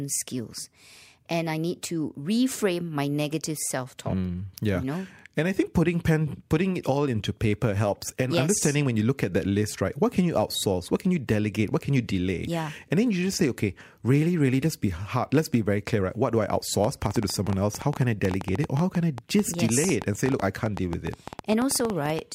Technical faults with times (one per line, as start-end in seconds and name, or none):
16.84-22.20 train of clicks